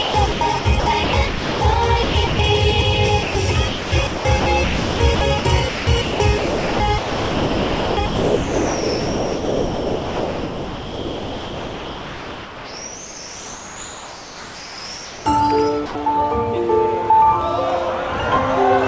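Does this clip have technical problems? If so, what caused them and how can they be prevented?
Yes. The sound keeps breaking up from about 0.02 to 1.61 s, 2.03 to 2.39 s, and across a long stretch from 3.68 to 15.26 s. Quiet portions and edges give way to a smooth hiss. This is sound chopped by the voice detector: the sender's detector likely toggled transmission on and off, and the receiver filled the gaps with comfort noise, roughly 0.75 s, 0.24 s and 9.9 s in total across those spans. Lowering the detector's sensitivity threshold or lengthening its hangover time would prevent this chopping.

At 3.23 to 3.35 s and again at 15.86 to 15.95 s, the sound briefly disappears into steady noise, lasting 120 ms and 90 ms respectively, before returning. This is sound dropped by the voice detector: the sender likely judged those soft moments to be background and stopped sending, and comfort noise took their place at the receiver. 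The call path underneath, with nothing above 8 kHz, fits G.722 at 64 kbps. Disabling discontinuous transmission, or using a detector tuned to keep low-level content, would prevent these dropouts.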